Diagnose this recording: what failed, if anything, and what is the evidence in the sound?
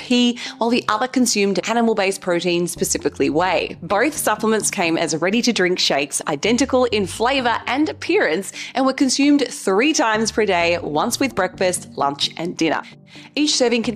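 No stage in the chain shows a failure: nothing in the sound points to trouble at the wiring, converter, buffer, format conversion, processing, network, storage or playback end.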